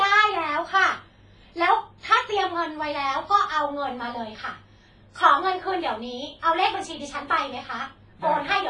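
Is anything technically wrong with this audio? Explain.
Yes. WMA-style compression runs throughout the speech. The sound points to a low-bitrate transform codec, likely WMA at around 24 kbps. Nothing remains above 10.6 kHz, and heavy quantisation smears noise across long blocks, leaving ringing, washy speech with hiss that breathes with the signal.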